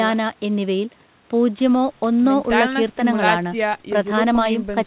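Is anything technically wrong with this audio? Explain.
No, nothing in this speech recording points to a technical problem. It carries the narrow, telephone-like sound of a call path with nothing above about 4 kHz, which fits G.711 A-law coding.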